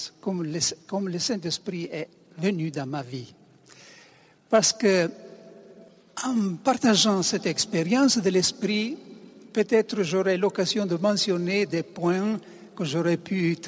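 No technical faults can be heard anywhere in this recording.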